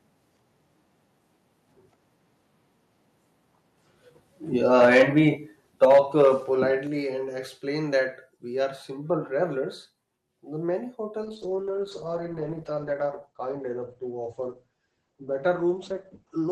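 Microphone overload likely drove the input about 7 dB past the converter's limit from 4.74 to 5.21 s, and about 4 dB past it from 5.83 to 6.28 s. The flattened peaks give the loudest syllables a harsh, crackling edge.

Inside those bursts, the call software likely reacted by stepping the microphone volume down, by about 2 dB at 4.85 s and about 6 dB at 5.85 s, then, just after them, by a further 4 dB at 6.87 s. Each step is a sudden drop in overall level.

From 11.24 s to the end comes a call bitrate drop. The encoder falls from 64 to 11 kbps for about five seconds, and its bandwidth narrows from 20 kHz to 8 kHz. The speech turns coarse and muffled.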